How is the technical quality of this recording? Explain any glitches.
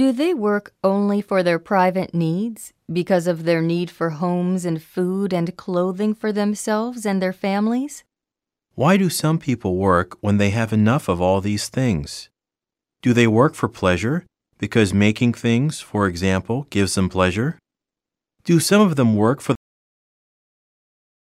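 The recording has one glitch, a cut-off end at 19.55 s. The final buffers were never written, so the speech stops mid-sound right after "of them work for" and drops straight to digital silence with no decay.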